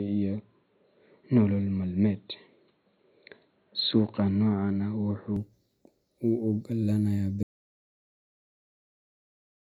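Input switched to a poorer device, from the start of this speech clip to 5.36 s: the sound is dull and boxy, with nothing above 4.2 kHz and a faint noise floor well below the speech. It likely comes from a narrower-band microphone or headset call profile, and it clears without any gap or obvious level jump. Audio dropout to silence, from 7.43 s to the end: the sound cuts to silence with no room tone, likely because the input was lost while the recording kept writing silence.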